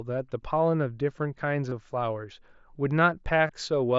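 Around 1.70 to 1.72 s, and again from 3.47 to 3.49 s, the speech briefly turns into a short buzzy tone held at steady level, with a slight warble as the real signal returns. Both are concealed Bluetooth headset packet loss. About 22.5 ms of audio failed to arrive from the headset each time, which fits a run of three lost frames. The phone filled each gap by repeating the best-matching stretch of the preceding waveform. The mSBC headset codec carrying the speech adds a light grain on louder sounds.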